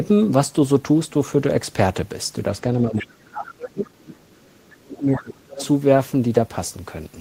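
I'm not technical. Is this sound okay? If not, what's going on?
No, there are two problems here, both from a call.

First, speech suppressed in double talk: from 2.85 to 3.96 s and again from 4.82 to 5.55 s, the talker's voice drops away sharply, almost to nothing at its worst. The device's echo canceller likely couldn't tell the talker apart from the other person and turned everything down.

Second, the other side's voice leaking through: a second voice sneaks in at 2.98 to 3.06 s, 4.04 to 4.82 s, 4.98 to 5.23 s and 5.55 to 5.67 s. It's faint to very faint, likely the other person coming out of the loudspeaker and not fully cleaned off the microphone.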